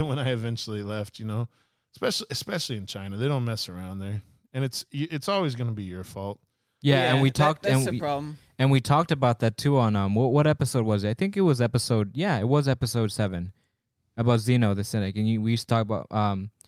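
Nothing technically wrong can be heard anywhere in this recording of speech, and the signal holds steady throughout with no audible fault in level, timing or continuity.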